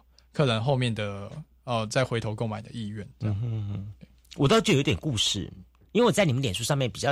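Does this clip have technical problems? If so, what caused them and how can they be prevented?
Yes. From 5.99 s to the end of the clip at 7.12 s, the speech abruptly runs about 6% fast and sits roughly 101 cents, about a semitone, sharp, with speed and pitch rising together. This is a drift correction step, likely from clock-matching software that jumped the playback rate in a single step to drain or refill its buffer. Using a shared clock source, or resampling that corrects drift gradually, prevents it.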